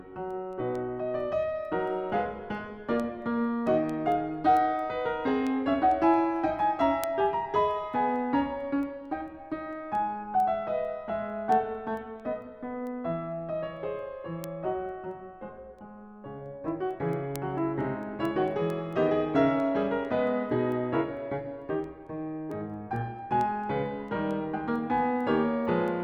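Word clock ticks run through the music from 0.31 s to 25.88 s, repeating about every fifth of a second, around a hundred in all. The receiving device is running on its own clock rather than locking to the sender's digital stream. The two clocks differ by something on the order of 100 ppm, so they keep slipping past each other. At each slip a single sample is dropped or repeated, and that discontinuity is heard as a brief tick at a steady rate.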